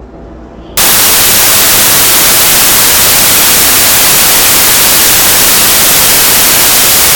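From 0.77 s to the end of the clip, the audio turns into samples built from the wrong bytes. The reader is assembling each sample from misaligned or swapped bytes, so the rapidly varying low-order bits land in the most significant positions. The result is loud, harsh broadband noise replacing the sound, close to white on loud passages.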